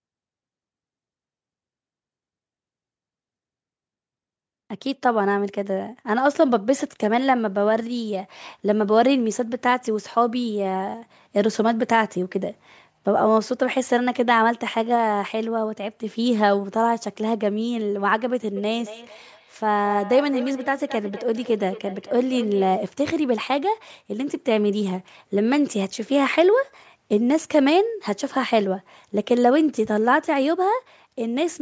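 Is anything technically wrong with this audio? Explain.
Yes, there's a feedback echo between two devices from 18.56 to 22.83 s. Two devices on the same call are close enough that one mic picks up the other's playback, which neither echo canceller can remove. The speech comes back roughly every fifth of a second, peaking about 14 dB below the direct sound.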